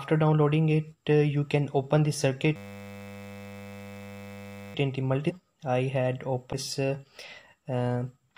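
From 2.56 s to 4.75 s the audio locks into a system hang loop. The host or driver has stalled while the sound hardware keeps replaying the same ring buffer. The repeating segment is 10.0 ms long, so it cycles 100 times per second, and the sound at that point becomes a steady 100 Hz buzz rather than a stutter. Once the loop releases, playback continues with essentially nothing missing.

Two brief disturbances follow, from 5.29 s to 5.32 s and from 6.52 s to 6.55 s. Each is roughly one 26.1 ms frame long and is heard as a short glitch where the audio jumps forward and briefly turns to a chirp, a burst of noise or a gap. The likely cause is a broken MP3 bit reservoir: frames were lost, and the frame that followed looked back for borrowed data and decoded bytes belonging to a different frame.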